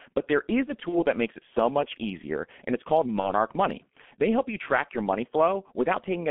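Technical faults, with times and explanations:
throughout, G.723.1 codec: The speech sounds muffled and hoarse, with smeared consonants and nothing below about 200 Hz or above 3.5 kHz. The heavy damage fits the G.723.1 codec at 6.3 kbit/s, whose 30 ms frames and slowly updated voice model blur quick changes.
0.89–1.03 s and 3.20–3.34 s, VoIP packet loss concealed by the speech codec: After "there is a" (ending before "that makes it so") and after "easier and it's called", the sound stretches into a fading buzzy tone or coloured noise and stays weak or distorted for tens of milliseconds or more. Each gap points to one lost 30 ms frame. The decoder repeats its last pitch and filter at falling gain, and later frames recover only gradually.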